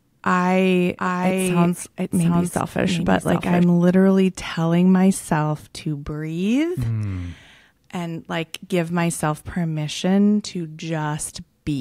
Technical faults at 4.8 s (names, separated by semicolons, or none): none